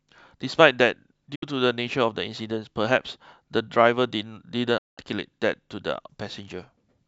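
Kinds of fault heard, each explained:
Digital broadcast dropout: the receiver stopped getting clean frames, so it muted until good ones came back, and whatever was sent in between is simply gone. Here the speech drops out twice, each time with a quick fade of about 8 ms into silence. There's a short 64 ms hole at 1.35 s and a longer 192 ms gap from 4.78 to 4.98 s. Both lengths fit whole 32 ms frames, two and six of them.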